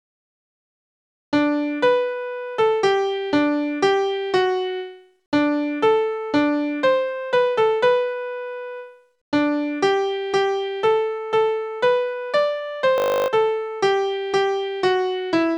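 At 12.98 s the audio locks into a system hang loop that runs until 13.28 s. The machine or its driver stalled, but the sound hardware kept replaying the same 20 ms stretch of its ring buffer, about fifteen times over. Because the loop is so short, you don't hear a stutter. It's a steady, flat buzz at 50 Hz, and roughly a third of a second of real audio never makes it out.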